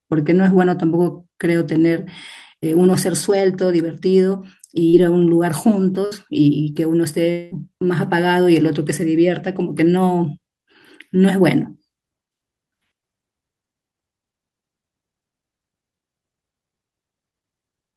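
At 4.89 to 4.95 s a brief smear passes: short concealed packet loss, about 40 ms never arrived, so the receiver extended the preceding sound over the gap.

At 6.05 to 6.13 s the last sound is held and fades out, a burst of packet loss in which about 60 ms went missing and was covered by continuing, dimming the last sound.

From 7.31 to 7.53 s a drawn-out fading continuation of the last sound replaces the audio, which returns further on; this is likely a long network dropout, with about 200 ms lost and concealed.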